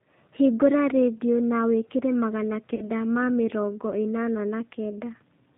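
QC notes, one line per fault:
throughout, G.729 codec damage: plainly audible. The sound is rebuilt from a filter and pulse model and cut off above 4 kHz, so it is rough and synthetic. This fits an 8 kbit/s G.729A stream.
2.75–2.89 s, VoIP packet loss concealed by the speech codec: about 30 ms of audio is missing, which fits three lost 10 ms frames. The decoder extrapolated from its last pitch and filter with fading gain. Recovery lags until 2.89 s.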